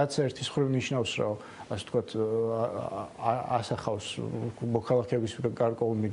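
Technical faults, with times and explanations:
Nothing stood out as a technical problem on listening.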